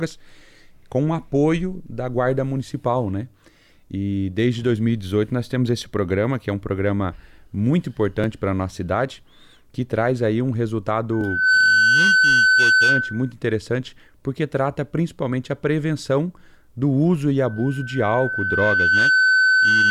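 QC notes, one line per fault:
11.12–13.32 s and 17.39–19.91 s, loudspeaker feedback squeal: a pure 1.5 kHz tone swells out of the sound, quickly in the first event and more slowly in the second, which is still ringing when the clip ends. Both peak a few dB above the programme. A microphone is re-amplifying its own loudspeaker with loop gain above one at that frequency. On a spectrogram each appears as a single bright horizontal line at 1.5 kHz, and on the waveform the envelope steadily rises.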